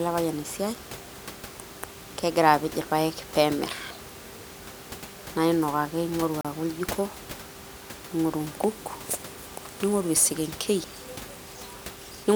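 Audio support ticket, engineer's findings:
Speech drops to silence 6.41–6.45 s, 36 ms, then resumes. Likely Bluetooth stall: delayed packets drained headphone buffer, playback paused until resent packets arrived.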